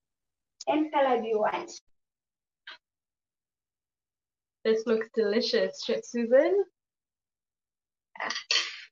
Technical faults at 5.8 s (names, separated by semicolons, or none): sudden gain jump